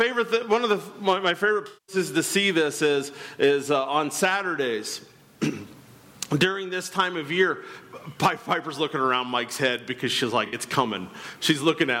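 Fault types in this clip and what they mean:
AAC frame loss with concealment: whole coded frames never reached the decoder, so it rebuilt the gaps from the last good spectrum. From 1.67 to 1.96 s the sound turns smeared and noisy, and a shorter patch at 10.46 to 10.56 s sounds similar. On a spectrogram both show as blurred, held spectral bands with soft, noise-like texture and missing fine detail. The waveform looks continuous but loses its normal transients and shape.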